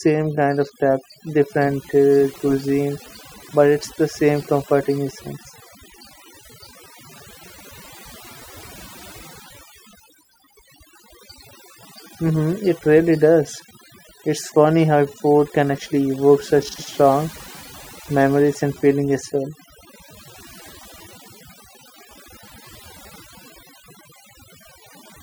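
Speech clip with overdone noise removal throughout, as if heavy noise reduction gated bands near the noise floor, leaving twinkling specks in near-silent gaps. On a spectrogram, the gaps show scattered isolated dots on black, and the speech has ragged holes.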